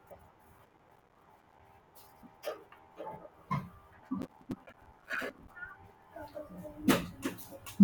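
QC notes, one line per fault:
0.59–1.69 s and 4.22–5.49 s, processor overload crackle: dozens of very short buffers, around 5 ms each, miss their deadline and drop to silence, giving gritty tearing. The waveform shows rapid hard-edged gaps, and the spectrogram shows dense vertical broadband streaks.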